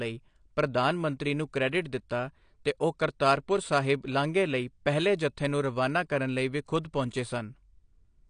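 From start to finish the speech sounds dull and smeared, with nothing above about 9.8 kHz and a fizzy, warbly edge on sibilants. That's likely AAC compression, with the codec dropping the top end and thinning bands, which fits a low bitrate around 32 kbps.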